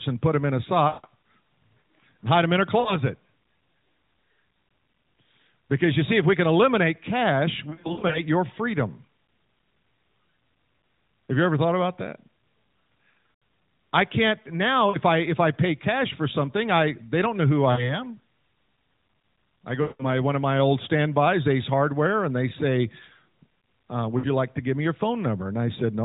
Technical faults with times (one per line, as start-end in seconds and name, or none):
0.88-1.06 lost AMR speech frames
2.80-2.94 lost AMR speech frames
7.70-8.21 lost AMR speech frames
13.32-13.42 lost AMR speech frames
14.90-14.97 lost AMR speech frames
17.72-18.02 lost AMR speech frames
19.82-20.04 lost AMR speech frames
24.18-24.27 lost AMR speech frames